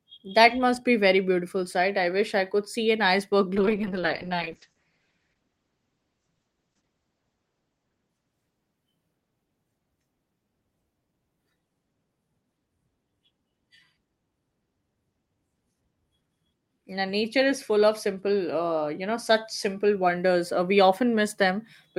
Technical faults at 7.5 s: call bitrate drop

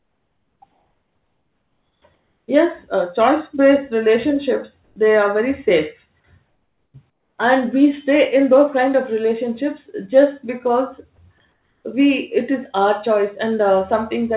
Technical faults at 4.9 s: comfort noise in place of the background

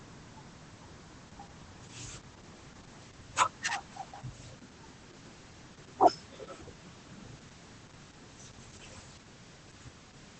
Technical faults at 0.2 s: Opus voice compression

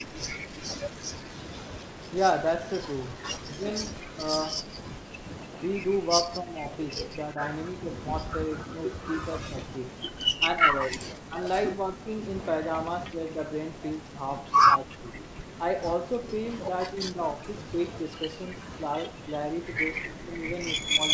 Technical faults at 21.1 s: speech suppressed in double talk

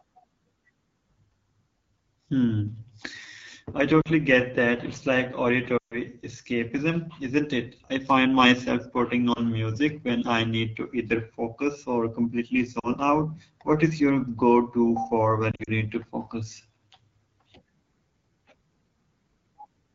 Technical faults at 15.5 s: AMR wideband (HD Voice) codec; lost AMR speech frames

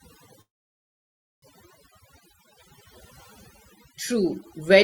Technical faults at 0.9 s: overdone noise removal; call audio freeze

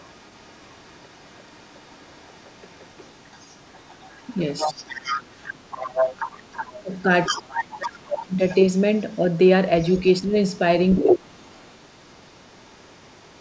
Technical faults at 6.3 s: other side's voice leaking through

